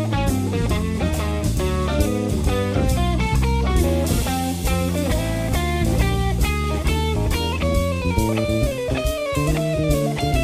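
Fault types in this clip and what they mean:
Nothing's wrong with this one; the audio just runs along the whole way without anything going amiss.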